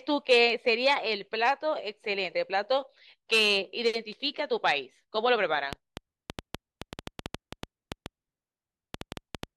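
From 5.73 s to 9.44 s a train of clicks ticks over the speech and through its pauses. About twenty near-identical pulses arrive unevenly at about 5.7 per second, well above the speech, likely from nearby equipment's interference. Their matching shape distinguishes them from random crackle.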